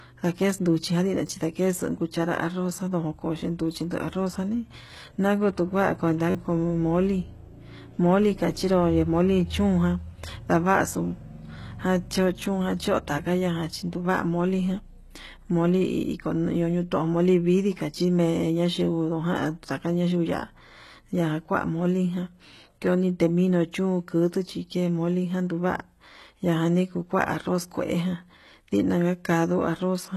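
From the start the whole clip has a band-limited, synthetic top end. Nothing sits above about 12.3 kHz, and the treble that is there sounds rebuilt rather than real, with s sounds coming out gritty and a bit lispy. That's most likely heavy HE-AAC compression, probably the v2 flavour at a very low bitrate around 16 kbps. The codec carries only the lower spectrum and fakes the highs by copying bands upward, so the harmonics don't line up.

Then there's a repeated buffer at 1.27 to 1.29 s, a tiny stutter with hard joins where one slice of about 10.7 ms plays twice more, which fits a 512-sample buffer, and roughly 20 ms of real audio is gone. The worst one is at 6.30 to 6.35 s, between "janii nanguu tujuan" and "como mole", where the slice plays four extra times, costing about 40 ms. A last single repeat comes at 22.87 s.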